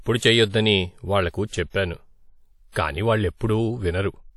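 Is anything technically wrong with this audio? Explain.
Yes. Throughout the speech there is plainly audible transform-codec damage, most likely WMA compression. The encoder's long blocks spread quantisation noise over tens of milliseconds around each sound, and weak spectral lines are dropped, which fits a bitrate around 48 kbps. The result is ringing, washy speech with a hiss that swells and fades with the signal. Nothing lies above 20 kHz, so the band is barely narrowed and this is not a simple low-pass or bandwidth cut.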